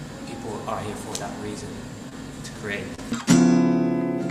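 Short concealed packet loss occurs twice, at 2.09 to 2.13 s and 2.95 to 3.00 s. Each time, about 20 ms of audio arrived too late. The decoder extended the preceding sound to fill the gap, then blended back. Each event is heard as a brief smear or wobble.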